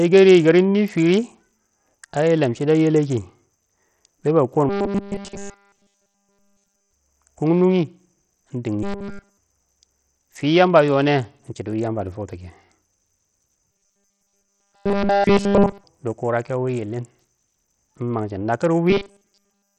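Speech carrying heavy codec damage throughout, with gritty noise and treble that flickers in and out. The sound likely comes from Bluetooth SBC compression at a low bit pool, consistent with roughly 64 kbps. On a spectrogram the upper bands look patchy and blocky, switching on and off frame to frame. Robotic sound from repeated short buffers appears at 4.69–6.93 s, 8.83–9.38 s, 13.72–15.84 s and 18.90 s to the end. There the audio becomes a rigid metallic buzz at 200 Hz, likely from a 5 ms buffer being replayed while essentially all new audio is skipped. A waveform shows identical 5 ms cycles, and a spectrogram shows flat, evenly spaced harmonic lines at multiples of 200 Hz.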